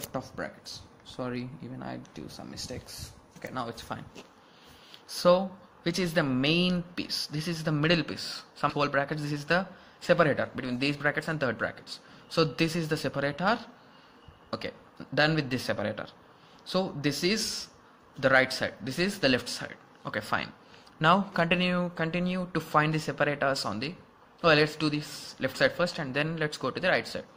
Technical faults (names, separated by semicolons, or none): skip ahead; jitter buffer speed-up